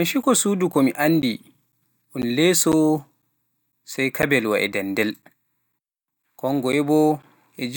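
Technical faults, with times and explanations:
0.22 to 7.23 s, periodic USB or driver dropouts: across this stretch of speech the audio drops out every 0.5 s, about fifteen times, each gap roughly 10 ms of silence. The evenly spaced losses are heard as a steady train of ticks riding on the speech, audible only where there is signal. Something on the system is stalling the USB bus or audio driver at a fixed interval, so a short slice of audio never arrives and is replaced by silence.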